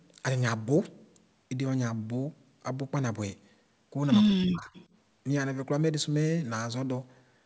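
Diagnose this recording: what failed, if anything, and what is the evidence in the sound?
Speech suppressed in double talk, at the call-processing stage: between 4.25 and 4.7 s the talker dips by up to about 40 dB, likely the echo canceller ducking everything while both sides talk.

Echo leak, also call processing: from 4.74 to 4.85 s there's a faint copy of the voice played on the loudspeaker, 156 ms late and roughly 30 dB down, likely loudspeaker echo slipping past the canceller.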